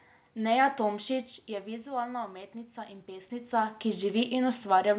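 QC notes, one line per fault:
0.87–4.13 s, automatic gain rising: after the input fell about 12 dB, the gain control crept up about 5 dB, so voice and room noise swell together.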